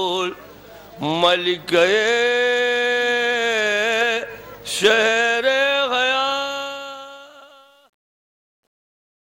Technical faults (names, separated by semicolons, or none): truncation distortion on a fade